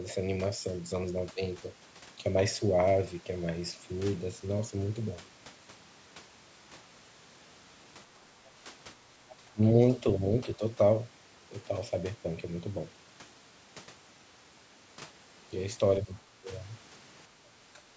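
Between 1.33–1.41, 9.37–9.61, 10.57–10.62, 16.05–16.11, 16.38–16.48, 17.29–17.34 and 17.74–17.81 s the speech briefly ducks. The dips are about 10 to 15 dB, and the deepest is about 20 dB across the longest one, at 9.37–9.61 s. This is speech suppressed in double talk, likely from an echo canceller turning the talker down while the far side spoke. The waveform shows short notches in the envelope, and the spectrogram shows faint vertical gaps.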